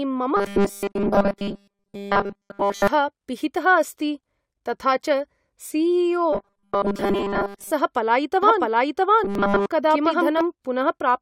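A metallic, rigid buzz at a steady 200 Hz runs through the speech from 0.37 to 2.88 s, from 6.33 to 7.72 s and from 9.24 to 9.66 s: robotic sound from repeated short buffers, likely caused by audio arriving too seldom so the player loops the last slice, which fits a 5 ms buffer, in place of nearly all the real audio in the first and last stretches and most of it in the middle one. Tiny skips at 1.38 s and 9.35 s, each about 6 ms long, are overlap between stream segments, where overlapping time stamps on segments that point to roughly 4 s lengths make the player trim audio that was never duplicated, so the waveform jumps. From 8.43 to 10.41 s a dry, equally loud copy of the speech trails about 0.7 s behind and starts and stops abruptly, a doubled audio track likely caused by a second, slower capture path being mixed in.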